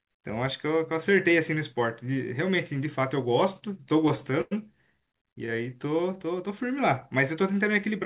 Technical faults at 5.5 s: jitter buffer slow-down; short stall from a late packet

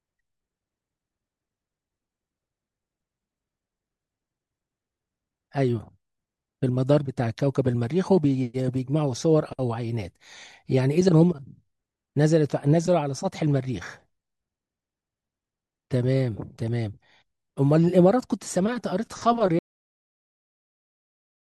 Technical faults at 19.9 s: cut-off end

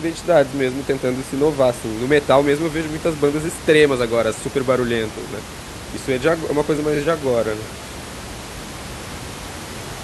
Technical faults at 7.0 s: repeated frames

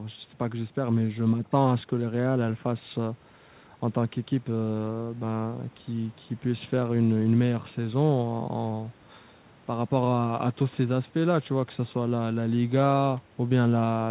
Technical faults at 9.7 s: none

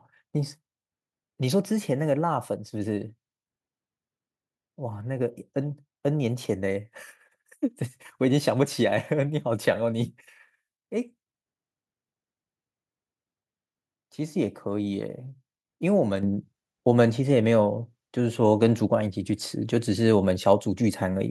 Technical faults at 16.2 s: microphone volume stepped up

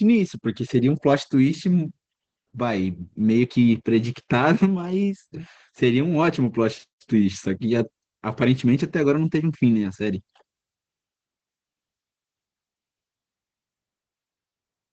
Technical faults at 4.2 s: Opus voice compression

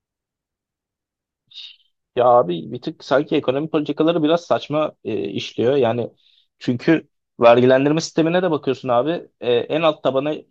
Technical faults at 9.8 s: none

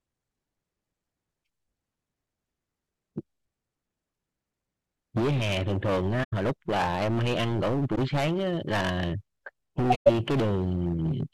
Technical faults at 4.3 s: none

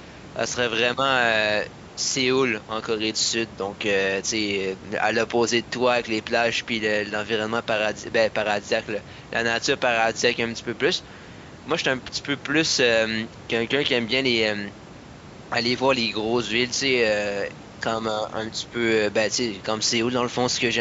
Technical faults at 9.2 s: none

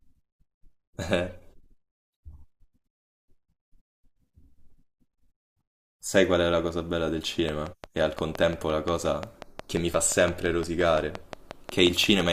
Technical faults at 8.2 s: train of clicks

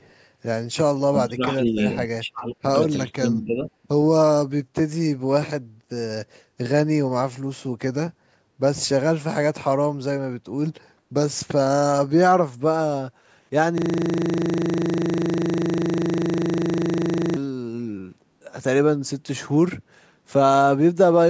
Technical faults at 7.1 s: none

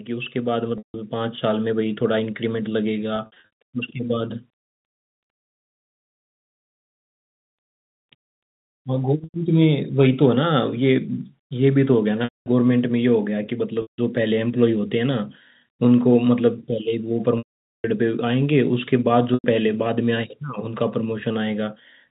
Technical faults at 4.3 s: none

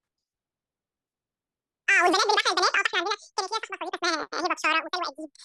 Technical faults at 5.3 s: audio read two samples at a time (double speed)

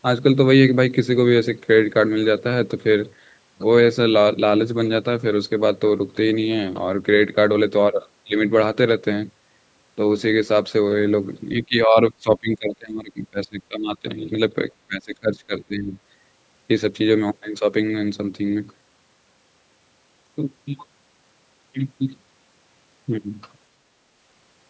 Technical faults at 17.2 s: none

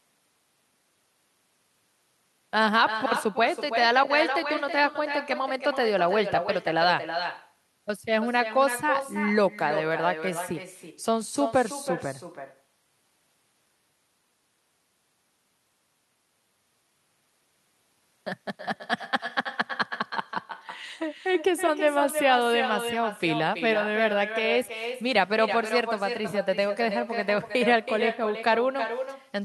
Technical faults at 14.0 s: echo with no canceller

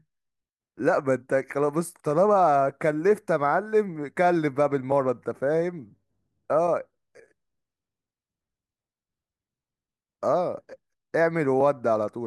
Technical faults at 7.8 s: none

